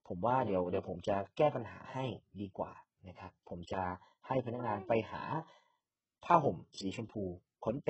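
Throughout the speech, s sounds turn gritty and lispy, the treble sounds synthetic and metallic, and nothing reaches above 8 kHz. This is likely heavy HE-AAC compression at a very low bitrate, around 8 kbps, rebuilding the upper band from copied lower bands.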